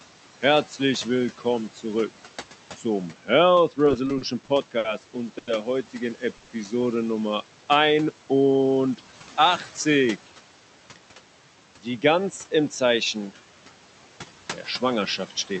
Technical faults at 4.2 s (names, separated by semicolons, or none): noise suppressor artifacts; repeated stalls (stutter)